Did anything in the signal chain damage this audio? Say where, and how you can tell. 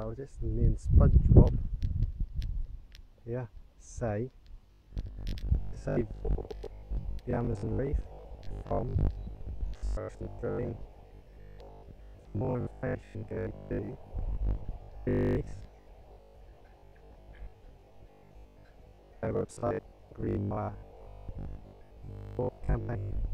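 Yes: robotic sound from repeated short buffers from 4.67 s onward. A 50 Hz buzz likely comes from driver-buffer underruns replaying 20 ms chunks for about half the audio.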